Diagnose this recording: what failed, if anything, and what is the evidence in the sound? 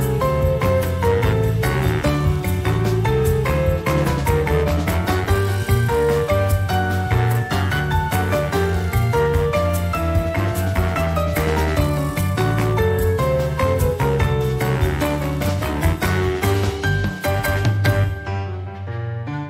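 Nothing in the signal points to a failure at any stage of the chain, from the analogue wiring and conversion through processing, transmission, storage and playback.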